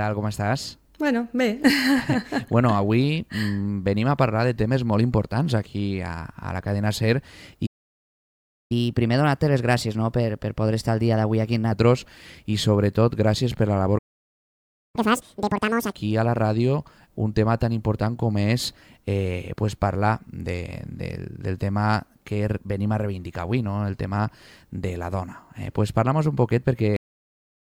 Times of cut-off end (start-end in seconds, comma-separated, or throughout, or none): 26.96-27.62